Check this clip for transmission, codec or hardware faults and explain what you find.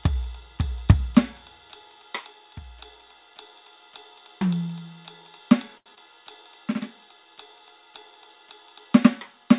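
Two transmission faults sit close together just before the six-second mark, heard through a narrowband call path that stops at 4 kHz, which fits G.711 mu-law coding.

From 5.78 to 5.91 s there is a short stall from a late packet. The jitter buffer ran dry, so the receiver held the last sound for about 76 ms until the packet arrived, then resumed where it left off. The music freezes briefly with a slight buzz or dip, and nothing is lost.

From 5.95 to 5.99 s there is short concealed packet loss. About 20 ms of audio never arrived, and the receiver continued the preceding sound to bridge the gap before blending back. This is heard as a brief smear or wobble in the music.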